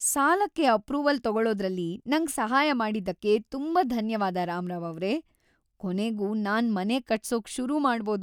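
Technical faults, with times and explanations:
No technical faults are present in this speech recording.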